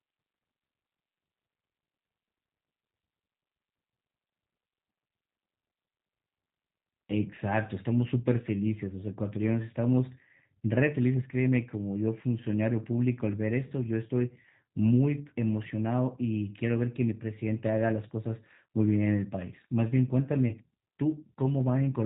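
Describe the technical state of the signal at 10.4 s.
At 10.4 s the speech carries G.729 codec damage present throughout: nothing above 3.8 kHz, with a rough, synthetic, pulse-rebuilt texture that fits 8 kbit/s coding.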